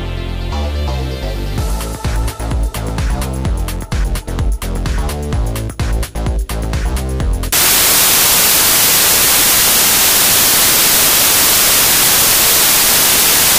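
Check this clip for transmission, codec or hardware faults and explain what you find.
One fault is present: samples built from the wrong bytes, starting at 7.52 s and running to the end. From that point the reader assembles each sample's bytes incorrectly, whether offset by a byte, in swapped order or with the wrong alignment, so the rapidly varying low-order bits end up as the most significant part of every value. The result is a sudden switch to loud, harsh broadband noise that covers the sound.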